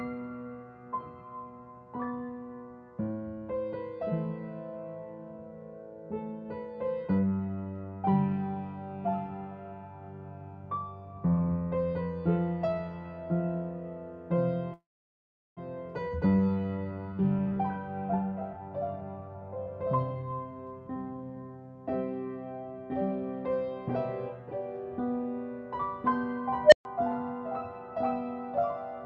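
At 14.73 s the flow of incoming packets stalls, most likely because they were held up in transit and the jitter buffer ran dry. This is a call audio freeze. The receiver stretches the last sound into a brief fading buzz, and the audio then drops to silence for about 740 ms before resuming at 15.59 s exactly where it left off. Roughly 0.83 s of gap is inserted while nothing is lost, so everything after it arrives that much later.

From 16.77 s to 21.58 s the receiver works off that backlog with a jitter buffer speed-up. The late packets have left the buffer holding more audio than its target, so the receiver repeatedly trims out short pitch-period-sized slices until about a second has gone. Playback runs at about 117% of normal speed with the pitch unchanged, which makes the passage sound noticeably rushed.

At 26.64 s an unstable filter takes over. A recursive filter with bad coefficients feeds its output back into itself and grows without bound. 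A tone of around 700 Hz swells to a loud, harsh squeal within about 86 ms and clips. The numbers then overflow and the output cuts out for about 129 ms until the filter resets at 26.85 s. Throughout the clip the call codec's band limit removes content above 8 kHz.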